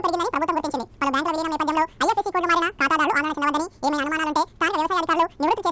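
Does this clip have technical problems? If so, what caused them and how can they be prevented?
Yes. Wrong sample rate runs throughout: the sound plays twice as fast and a full octave (12 semitones) higher, which fits audio captured at 8 kHz being played out at 16 kHz. Unlike a pitch shift or time-stretch, speed and pitch rise together by the same ratio. Prevent it by reading the file's true rate and resampling before playback.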